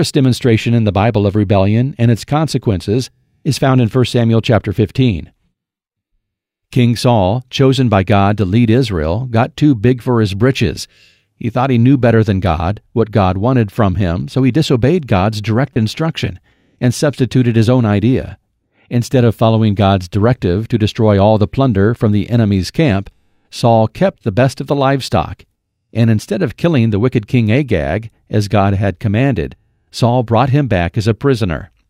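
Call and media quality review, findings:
Corrupt frame decoded, 15.74–15.76 s in speech, just before "instruction and substituted his": short loud squeak-like burst peaking near -5 dBFS across a few frames. Decoder played bit-damaged frames, misplacing energy spectrally. Added noise, not smeared concealment as with packet loss.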